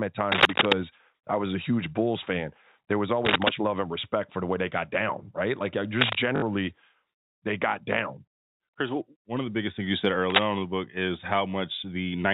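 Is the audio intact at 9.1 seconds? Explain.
Yes, the speech at 9.1 seconds is intact, with nothing beyond the narrow telephone band of its G.711 coding.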